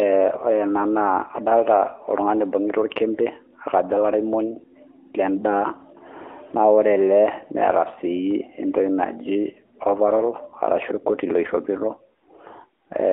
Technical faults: AMR narrowband mobile codec

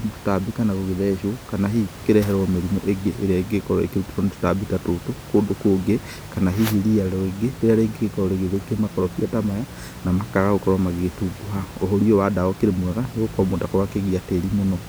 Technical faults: none

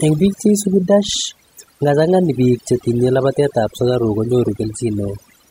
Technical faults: overdone noise removal

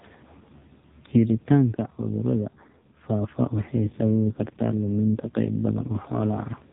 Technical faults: AMR narrowband mobile codec

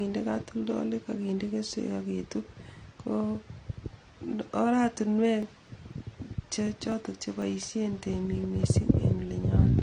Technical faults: AAC compression; periodic USB or driver dropouts

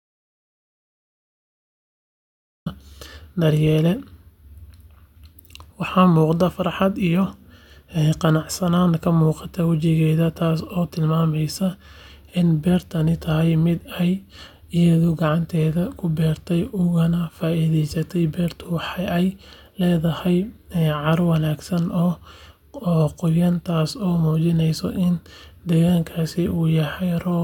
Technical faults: audio dropout to silence

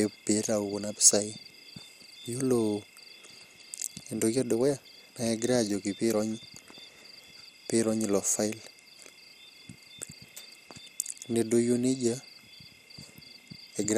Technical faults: MP2 compression

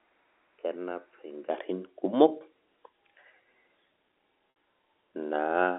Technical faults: input switched to a poorer device; packet loss with pitch repetition

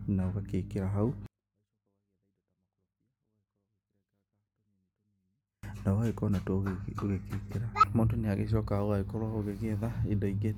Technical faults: 24-bit alignment error (too quiet)

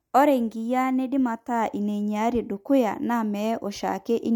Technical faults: low-bitrate audio saved at a high bitrate

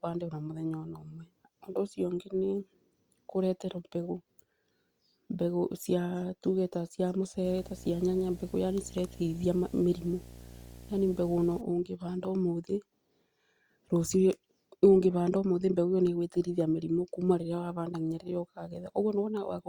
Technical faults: video or display buzz

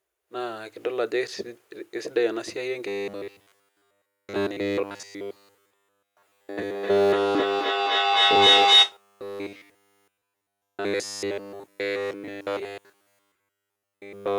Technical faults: robotic sound from repeated short buffers; feedback howl

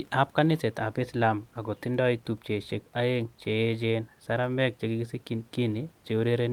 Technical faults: none

